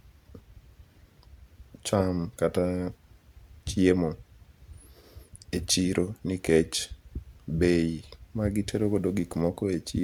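No technical faults turn up anywhere in this speech recording, so there's nothing to walk through in time order.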